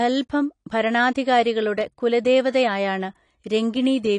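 Likely low-bitrate AAC compression throughout, which fits about 32 kbps: the speech loses everything above 10.2 kHz, sounding dull and smeared with audible warbling artefacts.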